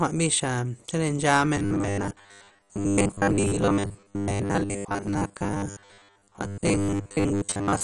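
Speech clip with two faults. Throughout, the sound points to low-rate MPEG Layer II coding, likely MP2 compression at a rate in the region of 48 kbps. With so few bits, the encoder switches off the upper sub-bands entirely, leaving nothing above about 11.3 kHz. The bands it keeps are coarsely quantised and flicker in and out, so the speech sounds dull, with a clearly audible gurgling, granular grit.

From 1.57 s to the end, new audio stops arriving often enough, and the playback side fills the gaps by looping its last short buffer while the real audio is skipped. This is likely the cause of the robotic sound from repeated short buffers. The loops impose a steady 100 Hz buzz, which fits a buffer of about 10 ms. Most of the sound from that point on is repeated material, so the speech becomes a rigid, metallic drone that only loosely tracks its original rhythm.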